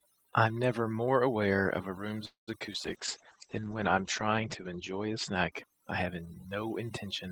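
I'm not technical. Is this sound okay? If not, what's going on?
No, this clip has several faults, all typical of an internet call.

Throughout, the background is unnaturally dead, with twinkling specks. This is overdone noise removal: a noise-cleaning tool was set too strong. It switches off any slice of the sound that looks like background hiss, and the quieter parts of the voice get caught and removed along with it.

From 2.25 to 2.49 s the sound stalls. The last bit of sound lingers briefly as a fading buzz, then drops to silence for about 0.15 s before the voice picks up where it left off. This is a call audio freeze, most likely because the data carrying the call was held up in transit and the receiver ran out of sound to play. Nothing is lost, but a gap of about a fifth of a second is inserted.

Right after that, there are three tiny glitches at about 2.60, 2.67 and 2.73 s, each a quick smear or wobble. 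These are short concealed packet loss. Roughly 20 ms of sound went missing each time, and the receiver patched the holes by stretching out what it had just played before blending back into the real voice.

From 2.86 to 6.88 s the voice turns muffled and rougher, as though heard through a wall. Most of the crisp upper sound is gone, and the top of the range falls from about 20 kHz to about 8 kHz. This is a call bitrate drop. The connection seemed to have less room, so the call was squeezed into far less data, and it was at its worst for about 1.7 s of that stretch.

Inside that stretch, from 3.37 to 3.70 s, the voice drags slightly, running at about 91% speed without any change in pitch, and sounds a little drawn out. This is a jitter buffer slow-down. The receiver was rebuilding its small reserve of sound by repeating tiny pieces of the voice, which added about 38 ms.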